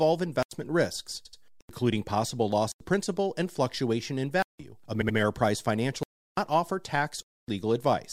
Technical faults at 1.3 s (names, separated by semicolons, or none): repeated frames